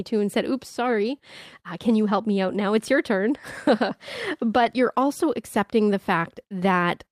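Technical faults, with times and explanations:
4.63–4.65 s, lost packet rebuilt from error correction: 20 ms of speech turns rough and noisy, played from the next packet's low-bitrate copy, with no gap or smeared repeat as concealment would leave.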